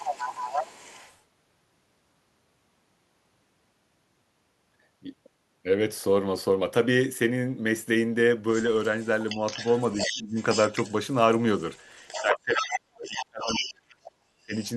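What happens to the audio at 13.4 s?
Other side's voice leaking through runs from 11.76 to 13.74 s, so it is still present at 13.4 s. A second voice sits under the main speech at roughly 10 dB below it. The likely cause is that the talker's device played the far end on a loudspeaker, the microphone picked it up, and the echo canceller failed to strip all of it out before sending the signal on.

Speech suppressed in double talk overlaps this, spanning 12.17 to 14.55 s. Within this span the main voice drops away sharply, by something like 35 dB at its deepest. The likely cause is that both sides were talking at once, so the echo canceller could not tell the local talker from the loudspeaker echo and turned everything down together. The suppression affects about two seconds in total across this stretch.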